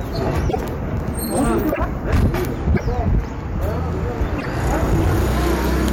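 Hard clipping runs through the whole clip: driven about 15 dB past full scale, around 7 percent of samples are flattened, giving harsh fuzz, flat-topped waveform peaks and spectrogram harmonics smeared upward. At 0.49–0.57, 1.71–1.79, 2.73–2.82 and 4.38–4.46 s, the sound jumps ahead with brief chirps or noise bursts, likely a broken MP3 bit reservoir after lost 26.1 ms frames, visible as short broadband smears.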